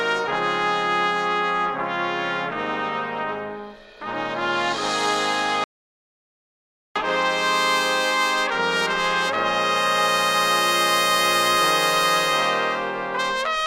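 At 5.64 s the sound cuts off mid-flow and returns at 6.96 s: an audio dropout to silence lasting 1.31 s. The gap is silent with no room tone, unlike a noise gate or fade, which points to the input likely being lost while recording continued.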